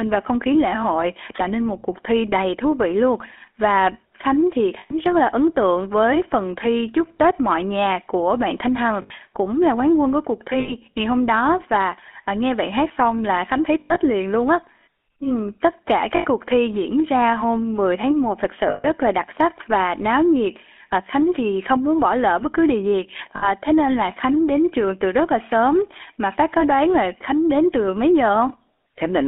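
Throughout, the GSM full-rate codec leaves the speech buzzy and gravelly. The band runs from 250 Hz to 3.5 kHz, which fits a 13 kbps phone line.

Lost GSM frames occur at 4.78, 9.02, 10.6, 13.8, 16.16, 18.7 and 23.36 s. Each loss lasts 60 to 140 ms. The decoder repeats the last good frame, so the sound hangs as a rough, metallic ring. At 13.8 s the losses spread over 160 ms, with the longest run about a tenth of a second.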